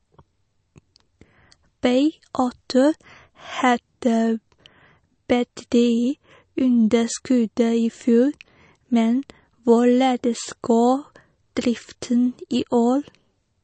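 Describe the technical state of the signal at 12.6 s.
At 12.55 s the stream likely lost about a single sample of dropped samples, so the waveform jumps straight from one value to a later one. That discontinuity is heard as one sharp click, a thin vertical line across the spectrum, far too brief to remove any sound.

Underneath, and throughout, the speech likely went through MP3 compression at a low rate, which fits roughly 36 kbps. Starved of bits, the encoder zeroes weak frequency lines that flicker between frames and leaves nothing above 8.3 kHz, giving a plainly audible watery, swirly texture and dull treble.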